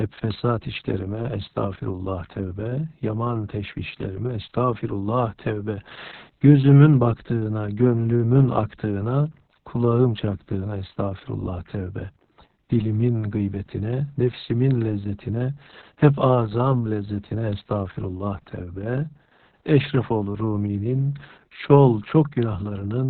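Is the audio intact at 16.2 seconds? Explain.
No, at 16.2 s this speech is still under the heavy Opus voice compression that runs through the whole clip. The codec is in its SILK linear-prediction mode, squeezed to narrowband, so nothing survives above 4.3 kHz and the excitation is coded very coarsely. That's why it sounds muffled, hoarse and a bit robotic. The damage fits a bitrate around 6 kbps with long 60 ms frames.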